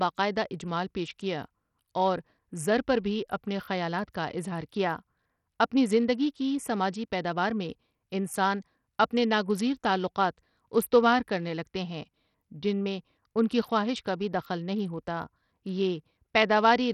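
From start to finish the speech carries a gritty, grainy roughness, with the treble flickering in and out rather than holding steady. The damage is heavy and fits Bluetooth SBC compression at a low bitrate, likely somewhere around 64 kbps. Too few bits are spread across its wide sub-bands, so the upper bands starve and the rest are coarsely quantised. On a spectrogram the high region looks patchy and blocky, with energy blinking on and off, and the spectrum is empty above about 20.6 kHz.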